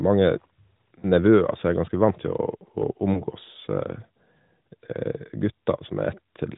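Lost AMR speech frames at 1.00 to 1.05 s and 3.14 to 3.24 s: radio errors corrupted a single 20 ms frame each time, so the decoder bridged it by reusing the previous pitch and vocal tract settings at lowered gain, heard as a brief dip or warble.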